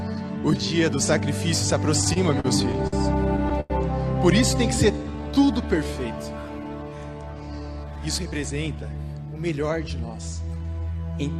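From 2.01 to 2.94 s there are repeated stalls (stutter): packets kept arriving late, so the jitter buffer emptied six times. The receiver held the last sound through each gap, the longest 52 ms and 152 ms in all, roughly a sixth of the span. Nothing is lost, but the audio drags and judders.

At 3.60 to 3.72 s comes a short stall from a late packet. With the buffer empty, the receiver stretched the preceding sound for 95 ms, then resumed where it left off. One sound is held too long with a faint buzz or dip, and playback now runs 95 ms further behind.

Between 4.92 and 5.88 s there is a jitter buffer slow-down. The receiver rebuilt its reserve by repeating single pitch periods and pause fragments, adding 179 ms. The audio plays at about 82 percent speed at unchanged pitch, so sounds are drawn out.

From 7.77 to 8.99 s there is a jitter buffer speed-up. The buffer held surplus audio, so the receiver trimmed short pitch-period pieces, about a fifth of a second in total. 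The audio runs at about 115 percent speed at the same pitch and sounds hurried.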